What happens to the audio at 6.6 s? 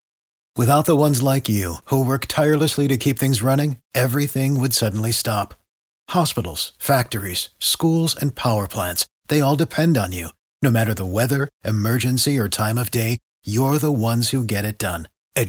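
Nothing goes wrong at 6.6 s; the speech there plays through intact, with no dropout, click, distortion or other audible fault.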